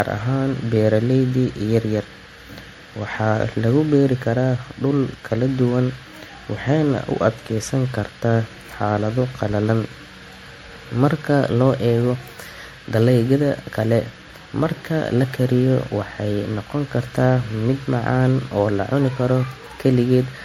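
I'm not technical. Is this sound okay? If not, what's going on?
No. Generation loss, throughout: the speech sounds swirly and hollow, likely from being re-saved as an MP3 about five times, each save adding more damage.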